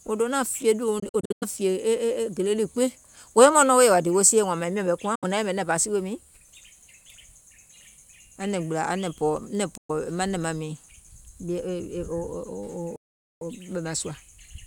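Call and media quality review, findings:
Bluetooth dropout, 1.0–1.44 s: speech chopped into several short holes, about 230 ms missing across 420 ms, longest gap about 93 ms. Likely packets arriving late at the headphones and being discarded; the pattern fits roughly ten lost audio frames.
Bluetooth dropout, 5.15–5.24 s: 70 ms missing, speech resumes further on with no catch-up.
Bluetooth dropout, 9.77–9.91 s: about 116 ms missing, same resume-further-on behaviour.

Playback stall, 12.96–13.41 s: speech halts mid-flow for about 450 ms, then continues. Likely the player's buffer running dry or its output thread blocking, so nothing was written to the device until recovery.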